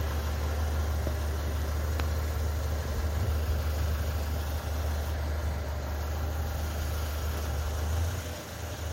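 Everyday sounds with no technical fault audible anywhere in the clip.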